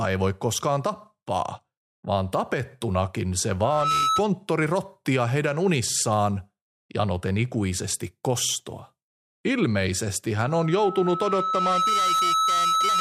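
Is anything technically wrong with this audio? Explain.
Yes. Loudspeaker feedback squeal occurs at 3.64 to 4.22 s and again from 10.39 s to the end. The microphone picks up its own loudspeaker, and the loop gain tops unity at 1.3 kHz. That tone swells over about a third of a second, then over about a second and a half, until it is roughly as loud as the speech.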